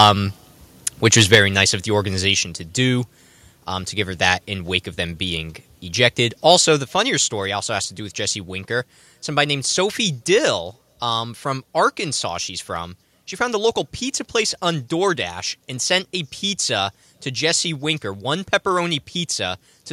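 Microphone overload at 0.00 to 0.07 s and again at 1.06 to 1.38 s: the speech peaks run about 5 and about 6 dB past the converter's ceiling, so their tops are sheared flat and the loudest syllables take on a harsh, crackly edge. The cause is likely an input level set too high for the voice, with only a small fraction of samples actually cut but enough to be heard.

Microphone volume stepped down at 1.35 s, just before "nice of the": right as that second distorted stretch ends, the whole signal, voice and room alike, drops by about 4 dB in a single jump, likely the call software reacting to the clipping by cutting the device's input volume. A further step of about 3 dB follows at 2.34 s.

Microphone overload returns briefly at 6.51 to 6.54 s, between "of them being ejected" and "the funnier story also", this time only about 1 dB over, a short gritty flick.

Microphone volume stepped down again at 6.84 s, just before "funnier story also has", by about 4 dB. 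A last drop of about 2 dB comes at 10.47 s, leaving the level noticeably lower than at the start.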